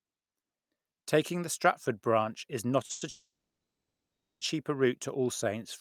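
At 2.85 s a sound is held about 40 ms too long with a faint buzz or dip, then the speech carries on intact. This is a short stall from a late packet: the jitter buffer ran empty, so the receiver stretched the last sound until the packet arrived.

From 2.91 to 3.03 s a held, fading buzz or hiss is inserted for 100 ms. From 3.09 to 4.43 s a longer one decays into about 1.1 s of silence before "route to" resumes. Nothing is lost. Both are call audio freezes, likely from packets delayed in transit that starved the jitter buffer, with the receiver filling the wait until the audio picked up where it stopped.

From 5.44 to 5.64 s the speech drags at 85% speed with unchanged pitch, gaining 38 ms. This jitter buffer slow-down repeats single pitch periods to rebuild the buffer's reserve.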